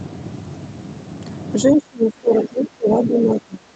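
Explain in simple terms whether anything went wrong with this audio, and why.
From 1.68 s to the end of the clip, the talker's voice sinks sharply, at its deepest to a small fraction of its normal loudness. This is speech suppressed in double talk: both people likely spoke at once, and the call's echo canceller turned the talker down along with the echo.

Between 2.42 and 2.46 s, a short, faint scrap of another voice slips through. This is the other side's voice leaking through, likely because the talker's loudspeaker played that person and the echo canceller did not fully remove it from the microphone.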